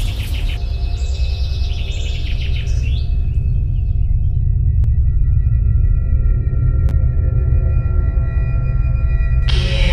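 At 6.89 s there is a brief jumbled flicker. This is chunks out of order: one 10 ms chunk arrived a single chunk late and played after its successor, so nothing is lost but the sequence swaps, leaving three hard joins.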